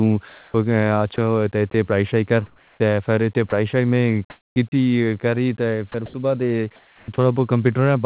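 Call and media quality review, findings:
Sound chopped by the voice detector, 0.28–4.72 s (about 940 ms replaced) and 5.92–7.18 s (about 440 ms). Quiet syllables and word edges drop out, replaced by comfort noise. Likely cause: sender-side voice detection gating. On a spectrogram, speech energy cuts off abruptly into flat, featureless noise patches. The waveform shows blunt onsets and offsets. Everything sits below the 4 kHz ceiling of the G.711 call path.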